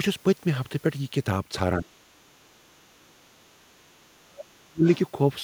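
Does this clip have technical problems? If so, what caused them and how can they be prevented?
Yes. Speech suppressed in double talk dips the speech at 1.79–1.87 s, 2.12–3.75 s and 4.12–4.84 s, by up to about 40 dB. The likely cause is an echo canceller turning down both talkers at once, which shows as hollow, faded bands in the waveform and spectrogram. A full-duplex echo canceller with better double-talk detection prevents it.

The other side's voice leaking through appears at 4.86–4.99 s, about 30 dB below the speech, likely as residual loudspeaker echo. It shows as a faint smear on the spectrogram. Headphones or stronger echo cancellation prevent it.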